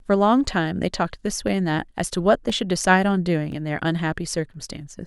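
Evenly spaced ticks cut into the speech about once every 1.02 s, from 0.45 s to 4.54 s. These are periodic USB or driver dropouts. A recurring stall on the bus or in the driver blanked roughly a millisecond of audio with silence each time.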